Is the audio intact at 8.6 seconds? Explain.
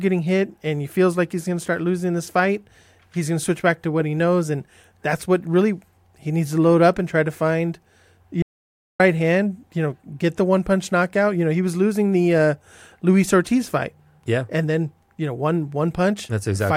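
No. The input likely dropped out, leaving silence from 8.42 to 9.00 s: an audio dropout to silence, cutting the speech abruptly for 0.58 s with no room tone.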